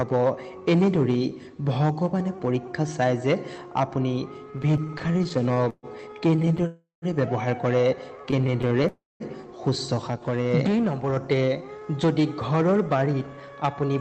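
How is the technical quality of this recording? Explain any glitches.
The recording has several delivery glitches from a call connection: three bursts of stuttering, two freezes, one slowed passage and one hurried passage. The sound passed through an Opus call codec, whose usual coding noise and loss of everything above 8 kHz can be heard throughout.

Repeated stalls (stutter) occur from 4.51 to 5.86 s, 6.31 to 6.66 s and 8.26 to 8.87 s. Packets arrived late or too slowly, so the jitter buffer kept running dry, and each time the receiver stretched the last sound until data resumed. The first burst is the worst, with 23 gaps filling about 394 ms, roughly 29% of that stretch, and the longest lasts 131 ms. The later two have 7 and 12 gaps, none longer than 19 ms. Nothing is lost. Unlike a single freeze, this is many short hitches in a row, so the sound drags and jerks.

Call audio freeze occurs from 6.67 to 7.05 s, right after the second stutter, and from 8.88 to 9.23 s, right after the third. 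Each is one continuous hold rather than a series of hitches. The last sound is carried on as a fading buzz or hiss and then drops to silence, for 130 ms in the first freeze and 190 ms in the second. Playback then resumes exactly where it stopped. The likely cause is a packet delay that emptied the buffer, adding about 353 ms and 321 ms of delay.

Jitter buffer slow-down occurs from 9.95 to 10.73 s. With the buffer running low or its target delay just raised, the receiver repeated single pitch periods or fragments of pauses many times over, adding 67 ms and bringing playback down to 92% speed. The pitch stays unchanged while sounds are drawn out, and a slight warble is possible. This distinguishes it from the stutter, which has audible breaks instead of a smooth stretch.

Jitter buffer speed-up occurs from 12.07 to 13.96 s, the mirror case. With too much audio queued, the receiver cut short pieces of one or a few pitch periods, removing about 150 ms in total. 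Playback runs at 106% speed with the pitch intact, which is fast enough to sound hurried. There are no gaps or repeats, only compression in time.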